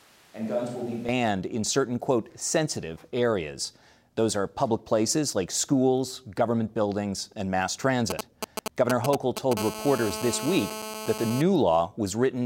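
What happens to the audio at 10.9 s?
At 10.9 s a hard, raspy buzz sits under the speech, pitched at about 217 Hz and thick with harmonics, holding steady at about 9 dB below the speech from 9.57 s to 11.42 s. This is GSM phone buzz: a nearby 2G handset on a call transmits in bursts about 217 times a second, and the audio circuitry rectifies those radio pulses into a constant buzz that has nothing to do with the recorded sound.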